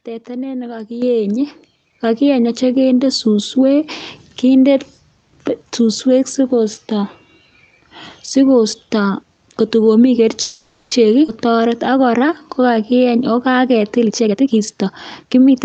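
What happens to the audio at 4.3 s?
Nothing goes wrong at 4.3 s: the speech passes through intact, carrying only the steady, narrowed sound of the call codec it was sent through.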